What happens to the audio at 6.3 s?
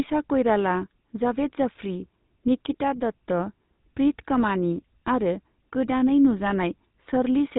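At 6.3 s the speech carries GSM full-rate codec damage, present throughout the clip. Excitation pulses spaced at every third sample give a gravelly buzz, which fits a 13 kbps stream. That roughness, beyond the 3.8 kHz ceiling, separates it from simple band-limiting.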